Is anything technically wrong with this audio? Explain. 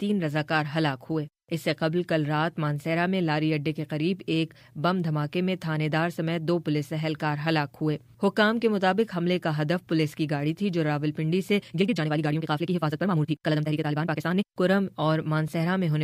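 Yes. From 11.60 to 14.48 s there is a time-stretched section. Software likely squeezed that stretch to run 1.93 times faster, dropping short pieces to hold the pitch steady. The pace jumps abruptly and the audio turns rushed, while its pitch stays unchanged.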